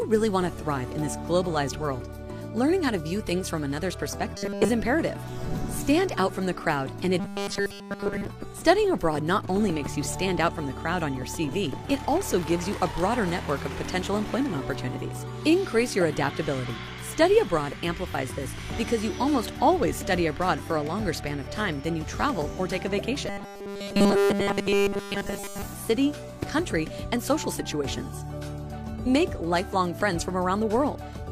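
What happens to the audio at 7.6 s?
From 7.20 to 8.25 s the sound becomes a rigid, metallic 200 Hz buzz: robotic sound, likely from a 5 ms buffer repeated throughout while the real audio was skipped.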